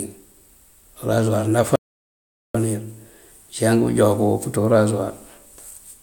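A speech recording with an audio dropout to silence from 1.76 s to 2.55 s: the sound stops abruptly mid-flow and returns just as suddenly, with about 0.79 s lost and no room tone in the gap, likely from the input cutting out while silence was written. The waveform shows a near-flat line, and the spectrogram shows a dark band.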